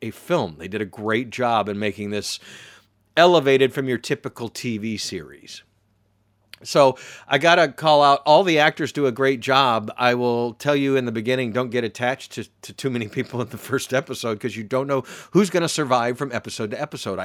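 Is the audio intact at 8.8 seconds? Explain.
Yes, at 8.8 seconds the speech plays through cleanly, with no dropout, click, distortion or other break in the sound.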